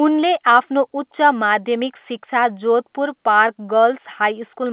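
No technical faults are audible.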